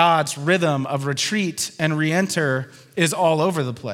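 No technical faults can be heard anywhere in the recording. There is nothing in the audio that calls for a timed description.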